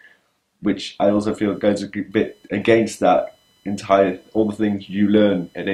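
Computer activity noise enters at 1.06 s and runs to the end of the clip: a faint buzzing, scratchy layer with a pulse rate of roughly 1 kHz, sitting about 40 dB below the audio. It rises and falls with the machine's workload rather than with the sound itself. Changing current draw from the processor, graphics card or mouse disturbs the ground the audio circuit shares with them, and that ground movement leaks into the recording.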